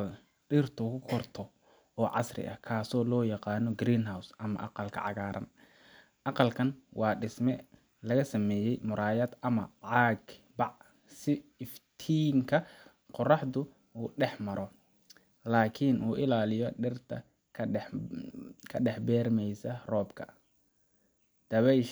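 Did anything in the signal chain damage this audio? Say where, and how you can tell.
No, nothing in this speech recording shows chain damage.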